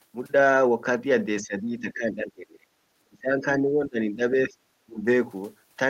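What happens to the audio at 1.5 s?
At 1.5 s the echo canceller has likely run into double talk: with both ends talking at once, it cannot tell the near talker from the loudspeaker echo and attenuates everything. This is speech suppressed in double talk, lasting from 1.42 to 2.67 s. The speech dips by as much as about 20 dB, with roughly a second of the span pushed down before the level recovers.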